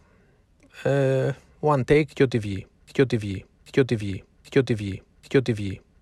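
At 2.88 s the playback chain appears to stall, most likely a player, encoder or stream that froze and kept resending the last fragment it had buffered. The result is a broken-record loop: a piece of speech about 0.79 s long repeats exactly, back to back, four times, and runs right to the end of the clip. Whatever speech should have followed is lost, replaced by the same stuttering fragment over and over.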